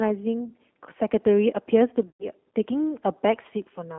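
The speech runs through the G.729 codec, an 8 kbit/s VoIP coder that rebuilds each frame from a vocal tract filter, a pitch predictor and a few pulses, which fits the plainly audible roughness and synthetic edge here, squeezed into a telephone band of roughly 250 Hz to 3.4 kHz. VoIP packet loss concealed by the speech codec strikes twice. From 0.46 to 0.50 s a gap of about 20 ms, which fits one lost packet, is patched by extrapolating the last pitch and filter. From 2.08 to 2.30 s a longer 120 ms gap, fitting about six lost packets, is stretched out and fades, and the voice stays weak or distorted after it.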